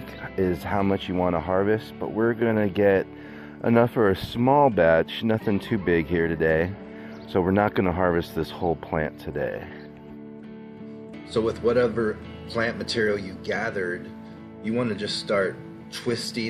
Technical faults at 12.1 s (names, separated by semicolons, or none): none